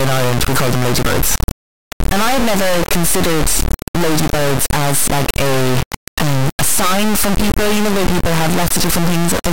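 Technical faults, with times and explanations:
Throughout: integer read as float. The speech samples appear to have been stored as 32-bit integers but interpreted as 32-bit floating-point values, which fits the sound. Those reinterpreted bit patterns become numbers either vanishingly small or enormously beyond full scale, so the output slams between silence and the clipping ceiling. The result is a harsh, extremely loud square-wave buzz in place of the speech, dropping out to silence wherever the signal is very quiet.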